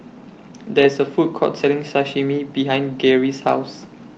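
No technical faults can be heard in this speech; it has passed through call microphone processing and a WebRTC call path with the Opus codec, whose band limit leaves nothing above about 8 kHz.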